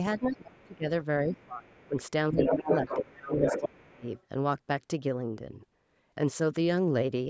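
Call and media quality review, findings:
Speech suppressed in double talk: talker's level dips and breaks up at 0.18–0.87 s, 1.25–1.96 s and 2.32–4.07 s, drops of about 20–25 dB. Likely echo canceller attenuating both sides during overlap.

Other side's voice leaking through: a second voice at 0.38–0.75 s and 1.35–1.89 s, faint at about 35 and 30 dB down, then at 2.38–4.23 s as loud as the talker. Likely residual loudspeaker echo left uncancelled. Band-limited call processing, nothing above 8 kHz.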